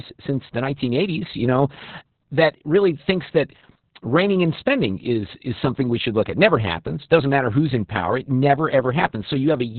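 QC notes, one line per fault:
Throughout, Opus voice compression: the speech sounds muffled, hoarse and faintly robotic, with nothing above 4.3 kHz, so sibilants and brightness are gone and the sound is telephone-thin. The encoder has dropped to narrowband and is running its SILK linear-prediction coder alone, modelling the voice as a filtered excitation coded very coarsely. The heavy damage points to a bitrate near 6 kbps, which leaves too few bits for the excitation and produces the rasp and buzz.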